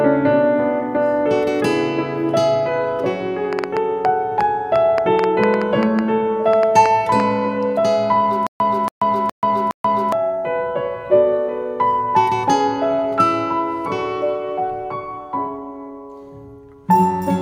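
From 3.53 to 7.21 s, a train of clicks, about twenty at an uneven 4.9 per second and roughly 15 dB above the audio, shows as thin vertical spectrogram lines, likely from interference. From 8.47 to 10.12 s, a stutter with silent gaps repeats a 280 ms fragment four times, separated by 135 ms of flat-line digital silence, likely a stalled stream.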